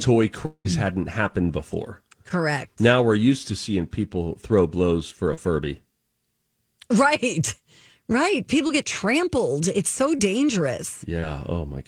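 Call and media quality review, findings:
Long network dropout, 0.45–0.67 s, just before "hadn't happened before": sound stretches into a fading buzz for about 190 ms, then roughly 70 ms of near-silence. About 200 ms of audio is gone. Likely jitter-buffer underrun on the receive path. Unlike a concealed loss, the fill decays to silence.

Short concealed packet loss at 2.29, 5.34, 8.67 (before "get trampled"), 10.17 and 11.20 s: brief smears or wobbles, each replacing 20–40 ms of lost audio with 10–34 ms of extrapolated fill. Decoder concealment blends back without any silent gap.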